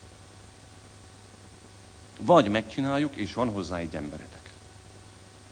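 No technical fault can be heard anywhere in the signal, which stays continuous and intact throughout the recording.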